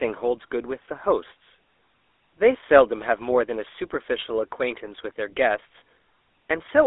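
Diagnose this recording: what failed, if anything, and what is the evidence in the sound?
GSM full-rate codec throughout, a codec-stage fault. The speech is confined to a 300 Hz to 3.6 kHz band with nothing above 3.8 kHz, and has a plainly audible buzzy, gravelly roughness from a vocal-tract model driven by sparse, regularly spaced pulses, fitting a 13 kbps coder.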